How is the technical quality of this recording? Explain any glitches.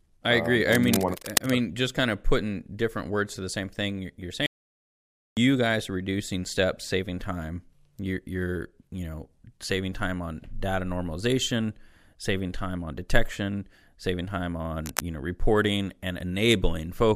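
The recording has three clear glitches: two bursts of scratching noise and one gap of dead silence.

Cable scratch noise comes first, from 0.70 to 1.51 s, right after "I uh agree". It returns briefly from 14.84 to 15.01 s, after "on detection saving time". Dense, uneven crackle sits over the speech, only a little below it in level. It sounds like rustling. The likely cause is a worn cable or connector being moved. Its contact resistance jumps around rapidly and injects noise.

An audio dropout to silence runs from 4.46 to 5.37 s, about 0.91 s. It starts after "the same thing you're". Speech resumes with "guys are reducing steps". The gap is total silence, with no room tone. Whatever was said there is lost. This likely happened because the input was briefly cut off or muted while the recorder kept writing silence.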